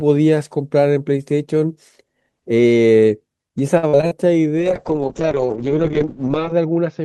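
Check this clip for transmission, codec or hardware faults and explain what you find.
Two transmission faults are present in this speech clip.

From 3.77 to 4.13 s there is repeated packet loss with a robotic sound. Four gaps, the longest 54 ms, are patched by extending prior audio, so the speech turns choppy. A spectrogram shows smeared, repeated frames.

From 4.59 s to the end there is a call bitrate drop from 32 to 6 kbps. The encoder codes coarsely and bandwidth narrows from 12 kHz to 8 kHz, giving a muffled, watery sound. On a spectrogram the energy above 8 kHz disappears.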